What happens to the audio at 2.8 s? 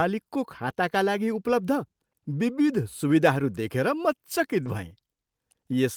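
Nothing goes wrong at 2.8 s: the speech carries straight through that moment with no dropout, click, distortion or other audible fault.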